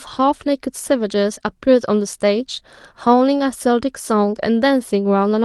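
Nothing goes wrong in this speech recording; it simply carries the character of a call codec, with the top end tapering off around 12 kHz the way an Opus call path at that bandwidth would leave it.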